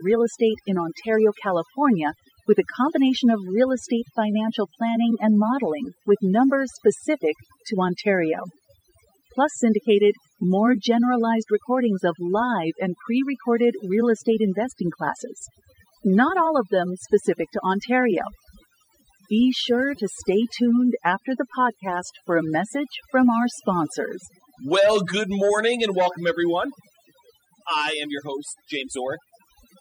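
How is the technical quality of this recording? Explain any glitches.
The main problem is overdone noise removal, and it runs through the whole clip. A noise reducer was pushed too hard on a noisy take: any frequency band sitting close to its noise estimate got pulled way down or switched off, and the quieter parts of the speech went with them. So the background drops and breaks up into little twinkly specks.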